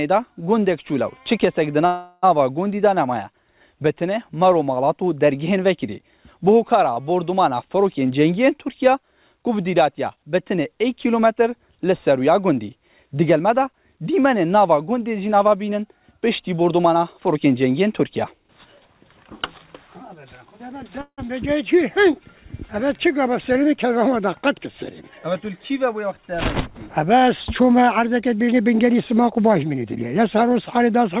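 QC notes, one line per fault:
1.86–2.38 s and 21.01–21.20 s, call audio freeze: the last sound is drawn out as a fading buzz for about 0.37 s, then about 0.16 s ending in roughly 70 ms of silence. Both likely come from held-up packets emptying the jitter buffer. The audio resumes where it stopped, so nothing is lost. These are longer and more audibly decaying than a stall.
6.94–6.98 s, short stall from a late packet: one sound is held about 26 ms too long, with a faint buzz or dip, while the receiver waits for the packet, then continues from the same place. It is too brief to fade into a buzz, which sets it apart from a freeze.
15.33–20.98 s and 28.48–30.16 s, jitter buffer speed-up: the audio runs at about 106% and then 110% of normal speed, at unchanged pitch, and sounds hurried. Roughly 0.3 s and then 0.2 s of pitch-period slices are trimmed to shed excess buffered delay. Timing changes while pitch holds, and the G.711 A-law call band, empty above 4 kHz, stays the same throughout.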